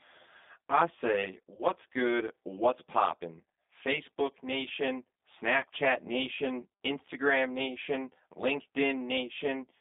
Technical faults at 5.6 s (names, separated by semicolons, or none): channel delay (comb filtering); G.729 codec; VoIP packet loss concealed by the speech codec